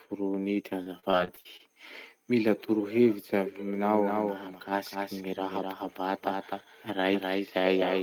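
Repeated packet loss (robotic sound) affects this speech clip from 0.83 to 1.61 s. Short holes, the longest about 41 ms, follow one another, and each is patched by stretching the preceding sound. Nearly a quarter of that stretch is concealed, which makes it choppy. A doubled audio track begins at 3.75 s and runs to the end. A second full-band copy trails roughly a third of a second behind, a few decibels quieter, with no decay or room colour, and it cuts in abruptly. The likely cause is a slower second capture path or an edit that leaves two copies misaligned.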